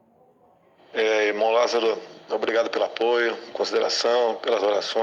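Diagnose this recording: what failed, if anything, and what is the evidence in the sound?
Nothing in the signal chain failed: no stage from wiring through converter, buffering, processing, transmission, storage or playback leaves any audible defect.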